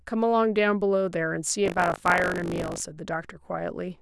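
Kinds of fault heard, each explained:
Buffer tearing: The buffer's writer and reader have slipped. A small slice of each period replays older sound. It sounds like a robotic 50 Hz rattle.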